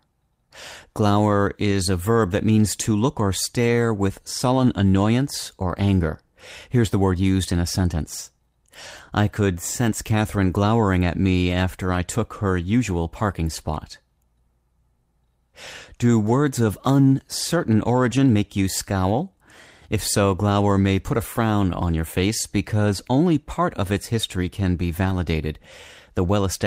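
Short lost packets rebuilt from error correction turn up at 1.71–1.73 s, 4.57 s (after "look or stare with"), 5.67–5.69 s, 10.45 s (between "I could sense" and "glowering at me after") and 16.27–16.29 s, each about 20 ms. A longer one, about 0.1 s, comes at 25.05–25.15 s after "its history can be", which points to three separate lost packets. There's no dropout. The decoder plays the low-bitrate backup copies that rode along in the following packets, so each spot gets a brief rough, noisy patch.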